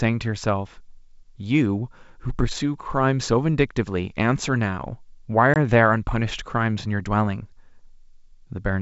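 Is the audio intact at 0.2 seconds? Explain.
Yes, the speech at 0.2 seconds is intact, carried over G.722 wideband telephone coding at 64 kbit/s with no fault at that moment.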